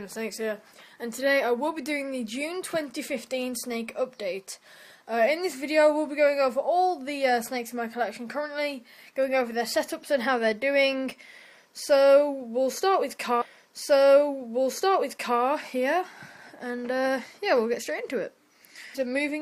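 A stream segment repeated from 13.41 s to 15.41 s. The player fetched or queued the same chunk of the stream twice, so when playback reached the end of that segment it jumped back and ran it again, adding 2 seconds of duplicated material. It is heard as a small blip at the jump back, followed by the preceding two seconds of sound replaying exactly before the audio continues onward.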